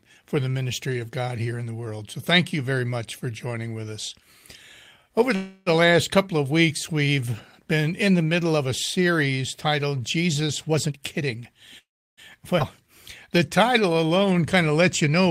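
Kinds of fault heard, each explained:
Call audio freeze: At 5.35 to 5.69 s the sound hangs as a fading buzz for about 0.31 s, and at 11.78 to 12.20 s it fades to about 0.33 s of silence. Both are likely caused by delayed packets emptying the jitter buffer. Afterward the sound resumes where it stopped, with nothing lost, so these are inserted gaps and not jumps.
Jitter buffer speed-up: From 10.69 to 11.54 s the sound plays at about 122% speed with pitch unchanged. Roughly 0.2 s is trimmed as repeated pitch-period cuts to shrink an overfull buffer. The change is gradual and hurried throughout, unlike a single abrupt jump.
Skip ahead: Near 12.6 s playback leaps forward with only a 7 ms join. Roughly a tenth of a second of sound is dropped outright. This is a single sudden discontinuity, unlike a speed-up, which spreads many tiny removals over a longer stretch.
Jitter buffer slow-down: From 13.39 to 14.34 s the sound runs at about 91% speed with pitch unchanged. 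Pitch periods are repeated to add 88 ms of reserve, so sounds are drawn out. This differs from a freeze because the sound keeps moving, just more slowly, with no stall or fade.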